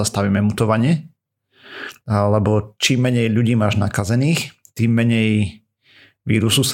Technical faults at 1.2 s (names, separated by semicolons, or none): none